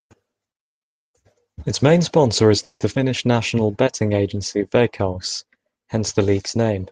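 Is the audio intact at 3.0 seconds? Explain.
No. A skip ahead occurs from 2.94 to 2.97 s. Around 70 ms of the speech was thrown away, either in transit or when an overflowing jitter buffer discarded it while later audio was already queued. Only about 10 ms of fill bridges the jump, so playback lurches forward by roughly 50 ms. The two sides are joined almost directly, which makes the speech jump abruptly forward at that point.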